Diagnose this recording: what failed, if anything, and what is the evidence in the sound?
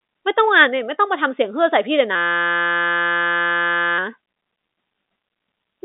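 At the driver or buffer stage, a system hang loop takes over from 2.15 s to 3.98 s. The speech gives way to a steady buzz at 172 Hz, because one 5.8 ms slice, which fits a 256-sample buffer, replays identically while the host is frozen. On a spectrogram this shows as a harmonic comb spaced at 172 Hz, capped below 3.8 kHz by the telephone band. The waveform repeats exactly, period after period. Little or no audio appears to be missing afterwards.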